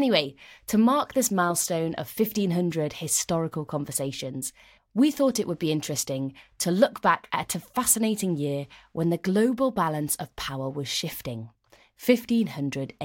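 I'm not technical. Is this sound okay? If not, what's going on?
Yes, this speech recording is fine. Nothing in it points to a technical problem.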